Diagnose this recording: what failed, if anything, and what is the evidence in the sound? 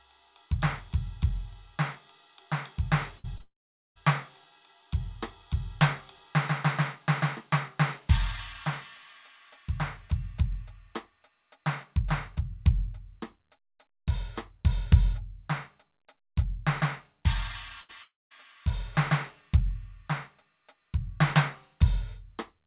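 Network stage, burst of packet loss: at 3.18 to 3.26 s and 17.81 to 17.91 s, the music is held as a fading smear for 56 and 72 ms, then resumes with 60 and 80 ms of material gone.

Network stage, short concealed packet loss: from 3.38 to 3.42 s, about 20 ms was missing and patched by extending the preceding sound, leaving a brief wobble in the music.

Network stage, long network dropout: the music decays and then sits silent within 3.42 to 3.97 s and within 18.03 to 18.32 s, with 440 and 200 ms of silence. A likely cause is a dropped connection, with concealment running out. The call path's 4 kHz band limit, consistent with G.711 A-law at 64 kbps, persists throughout.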